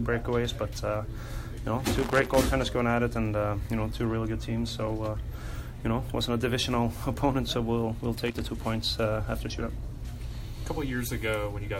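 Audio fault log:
1.96–2.35 s and 8.28–8.43 s, loose connector crackle: two short bursts of irregular scratching, about 0.39 s and 0.15 s long, where a worn or dirty contact repeatedly breaks and remakes the signal path as it shifts, chopping the audio and adding pops from any DC on the line. Unlike evenly spaced digital clicks or clean dropouts, the interruptions here arrive unevenly and cluster into a rough, gritty texture.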